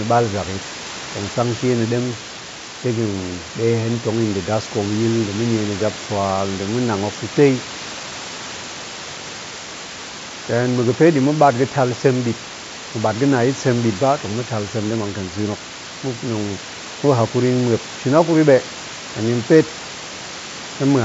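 This is a speech recording, and nothing is technically wrong with it.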